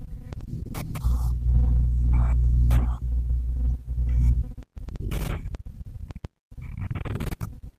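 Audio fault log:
Nothing stood out on listening to this speech recording.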